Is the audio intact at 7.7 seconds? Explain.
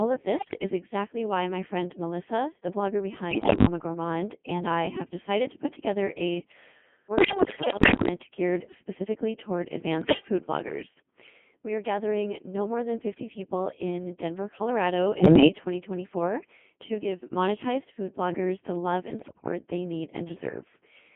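No. From 7.18 to 8.08 s there's a burst of bit errors on digital voice radio. At around one flipped bit in ten, each damaged frame decodes with the wrong pitch, level, voicing or spectrum, so the speech lurches into bleeps, warbles and robotic gibberish right through 7.7 s.

Underneath that, the whole clip runs through the Codec 2 vocoder, which fits its 2.4 kbit/s mode squeezed into a 150 Hz to 3.4 kHz band. It rebuilds speech from sine waves using only pitch, voicing, energy and envelope, so it sounds buzzy and robotic.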